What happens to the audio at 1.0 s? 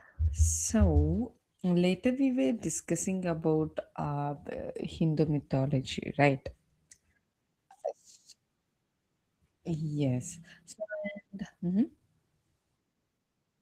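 At 1.0 s, as throughout the clip, Opus voice compression is audible: a hybrid coder at what sounds like around 16 kbps leaves the speech hoarse and slightly robotic. On a spectrogram, the band above 8 kHz looks sparse and patchy.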